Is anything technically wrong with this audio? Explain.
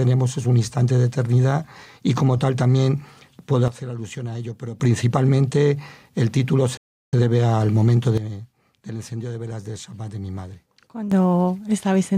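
Yes, there are two kinds of fault. A sudden gain jump occurs from 3.68 to 4.8 s and again from 8.18 to 11.12 s. The level drops by about 12 dB in a single step, with the background falling along with the sound, and recovers just as abruptly. This is likely a gain setting applied without a ramp.

A playback stall occurs at 6.77 s. The output goes silent for about 0.36 s and then resumes. This is likely the player running out of buffered data or its audio thread being blocked.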